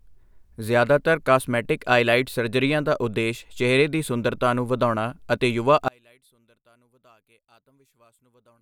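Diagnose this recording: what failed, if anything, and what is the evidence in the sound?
From 5.88 s to the end at 8.62 s, the speech collapses. The level falls by about 37 dB, leaving only a faint residue where the voice should be. That is the signature of one channel inverted. The voice sits equally in both channels, so when they are summed to mono the common part cancels and only the small difference survives. The stage is likely the analogue wiring, with one leg's polarity reversed.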